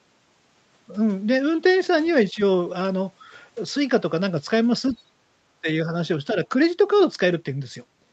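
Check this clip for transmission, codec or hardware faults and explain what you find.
One fault type turns up in the clip: three short dips in the speech, likely from speech suppressed in double talk. The band stops at 8 kHz, which fits a wideband Opus call path.

Speech suppressed in double talk appears at 2.33 to 2.40 s, 4.91 to 4.95 s and 5.62 to 5.66 s, each dip lasting 40 to 70 ms. The level falls by roughly 5 dB. An echo canceller that cannot tell the near talker from loudspeaker echo during overlapping talk attenuates both, so the speech briefly ducks before recovering.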